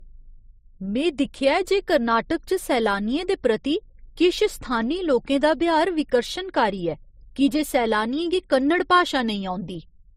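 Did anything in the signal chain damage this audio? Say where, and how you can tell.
Yes. The codec stage, throughout the speech: nothing above 15.8 kHz, plus two different flavours of compression smear stacked together, likely transcoding between lossy codecs, fitting low-rate MP3 re-encoded to Opus.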